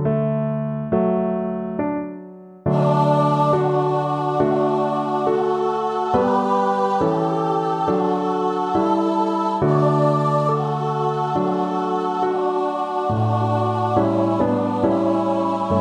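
No technical faults can be heard anywhere in the audio, and the signal stays intact and continuous throughout.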